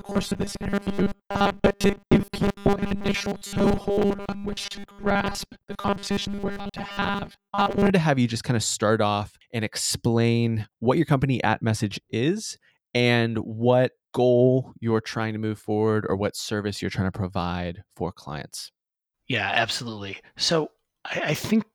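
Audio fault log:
0.01–7.9 s, robotic sound from repeated short buffers. The speech becomes a rigid, metallic buzz pitched at 200 Hz. It still roughly tracks the syllables. The likely cause is new audio arriving too slowly, so playback loops the last fragment to fill the gap. A 200 Hz buzz fits a repeated slice of 5 ms. Most of the signal in this stretch, roughly seventy percent, is repetition rather than fresh audio.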